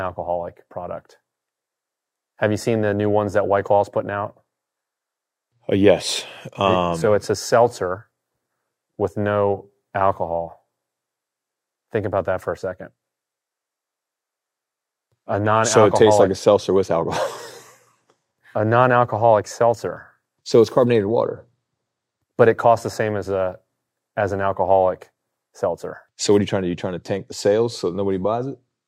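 No technical faults can be heard at any point in the speech, so there is nothing to describe in time order.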